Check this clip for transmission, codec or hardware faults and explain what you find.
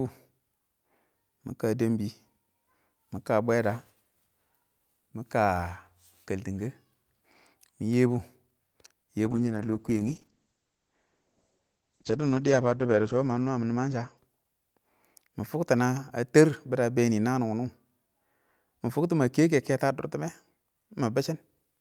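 One transmission fault appears: a call bitrate drop from 9.31 to 15.79 s. The encoder was starved of bits, which fits a fall from about 64 to 10 kbps for roughly four seconds. The speech turns coarse and watery and is muffled, with the bandwidth cut from 20 kHz to 8 kHz.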